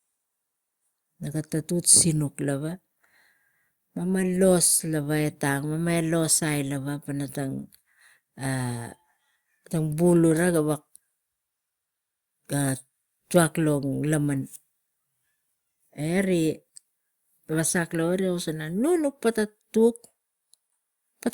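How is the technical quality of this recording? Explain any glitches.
Nothing in the technical quality stood out on listening, and there are no glitches to explain.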